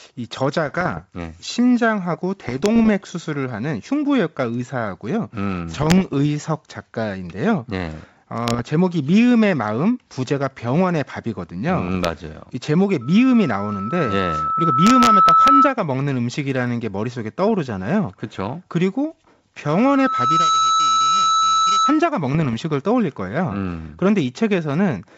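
Bit errors on an ADPCM link appear from 0.67 to 1.07 s, 2.49 to 2.89 s, 5.77 to 6.15 s, 8.47 to 8.61 s and 11.88 to 12.08 s. Sparse flipped bits upset the decoder's step size and predictor, so each burst sounds like pops and rough, briefly level-shifted speech. Loudspeaker feedback squeal follows from 13.01 to 15.76 s: the microphone picks up its own loudspeaker, and a 1.3 kHz tone swells over about two seconds to roughly 10 dB above the speech. It returns from 19.65 to 22.08 s, building faster, in under a second, to about 5 dB above. A final burst of bit errors on an ADPCM link, 22.35 to 22.55 s, adds more pops and roughness within the clean wideband G.722 sound.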